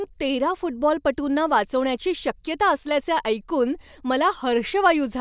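Nothing in the recording stands out as a technical problem; it's just speech, with no glitches, dropouts or odd moments to point to at any time.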